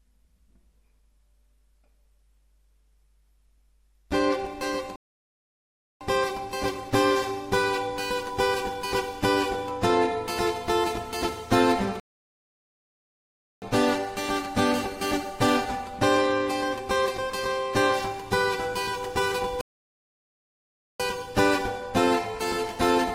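Rebuffering stalls at 4.96 to 6.01 s, 12.00 to 13.62 s and 19.61 to 21.00 s: playback ran dry, so the sound drops to silence for about 1.05, 1.62 and 1.39 s, then resumes exactly where it stopped, losing nothing but stretching the timeline.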